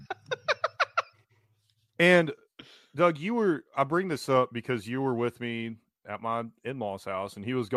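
No technical faults can be heard anywhere in the speech; the signal stays continuous and steady throughout.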